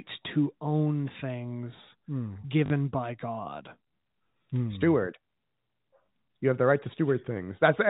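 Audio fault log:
2.66–2.70 s and 6.06 s: packet loss with last packet repeated. Right after "to own things mm", 40 ms of sound, and later 20 ms, is replaced by a replay of the preceding chunk, which fits 20 ms packets. The longer gap buzzes briefly at 50 Hz. On a spectrogram this shows as copied vertical slices with a sharp edge at each join, and the waveform shows repeated cycles. The G.711 telephone coding cuts everything above 4 kHz.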